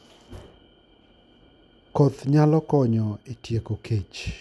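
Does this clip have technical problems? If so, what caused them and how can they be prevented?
No, the speech signal shows no technical faults, with nothing in it that points to a problem in recording, processing or playback.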